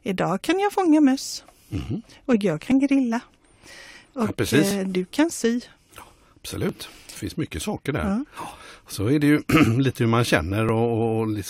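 Overlap between stream segments produces brief skips at 2.72–2.74, 4.71, 6.69, 8.70 and 10.69–10.71 s, roughly every 2 s, as overlapping segment boundaries trim 10–20 ms of real speech. Each sounds like a tiny skip; the waveform jumps discontinuously, and the spectrogram shows a thin vertical broadband line.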